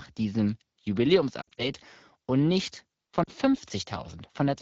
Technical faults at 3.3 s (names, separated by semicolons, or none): lost AMR speech frames